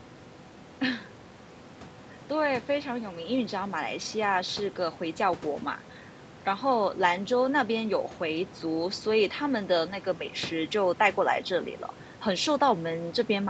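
Nothing stood out on listening to this speech, which comes through a call path whose audio stops at about 8 kHz.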